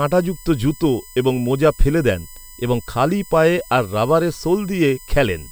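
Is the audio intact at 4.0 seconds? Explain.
No. USB whine runs through the whole clip, including 4.0 s: current drawn in the USB bus's 1 ms frames and 125-microsecond microframes leaks through power or ground, giving a fixed whine at 1 kHz and, strongest, 8 kHz, about 25 dB below the speech.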